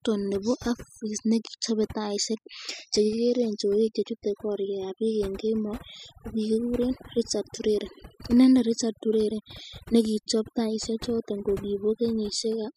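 From start to finish there's overdone noise removal: the denoiser was pushed too hard, so the background goes near-silent with twinkly specks.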